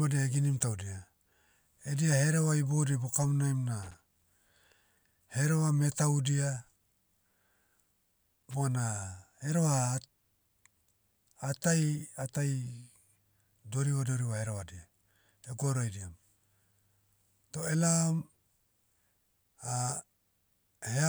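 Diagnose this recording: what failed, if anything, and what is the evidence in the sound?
The failure is in the analogue wiring: loose connector crackle, in two irregular bursts of scratchy noise in the speech, from 3.83 to 4.22 s and from 8.40 to 8.54 s. The pattern points to a worn or dirty contact in a cable or jack that intermittently makes and breaks as it shifts, chopping the signal into rapid fragments. Any DC present on the line turns each break into a small pop, giving the crackling texture.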